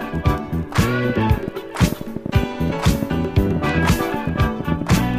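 From 1.10 s to 4.99 s a train of clicks ticks and pops over the sound, roughly thirty similar pulses at an uneven pace of about 8 per second, peaking about 10 dB above the signal. Interference from nearby equipment or a faulty connection is the likely source.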